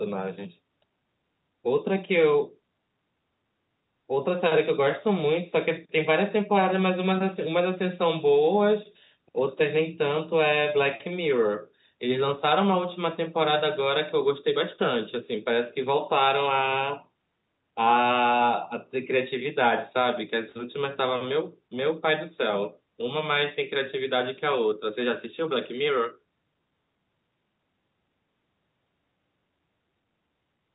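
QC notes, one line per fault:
No faults found; the speech runs through standard call microphone processing and G.711 A-law telephone coding, which passes nothing above 3.9 kHz.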